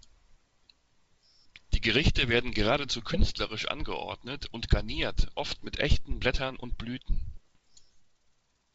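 Speech carried over a G.722 wideband link, with bit errors on the ADPCM link. Pops and rough bursts with brief level jumps occur at 3.19–3.27 s after "werden geradezu", at 5.54–5.66 s before "mit echten", and at 7.33–7.77 s. Each flipped bit corrupts the decoder's step size and predictor, so the damage rings on briefly. The error rate is about two in a thousand bits, and about 1.5 in a thousand in the last burst.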